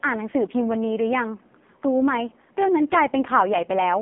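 A short speech recording carries AMR narrowband mobile codec damage from start to finish. The audio is confined to a telephone band of roughly 200 Hz to 3.5 kHz, with nothing above 3.7 kHz, so sibilants and breath detail are gone. The heavy buzzy, synthetic texture comes from the codec rebuilding the voice from a vocal-tract model and sparse pulse excitation with very few bits, which fits AMR-NB running at its 5.15 kbps mode.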